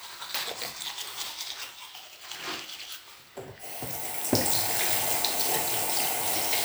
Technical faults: none

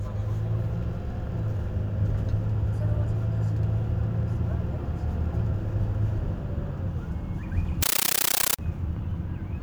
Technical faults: compressed stream played as audio

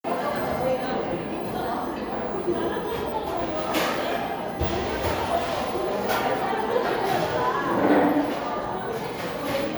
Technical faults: none

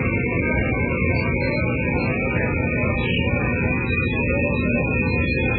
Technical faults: MP3 compression

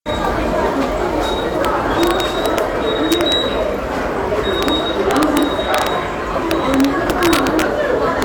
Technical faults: integer overflow

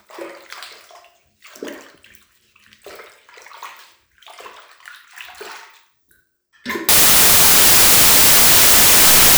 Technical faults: samples built from the wrong bytes

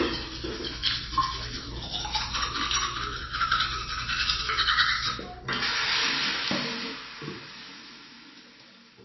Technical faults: MP3 compression

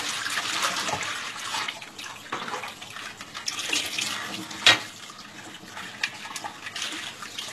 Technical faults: HE-AAC compression

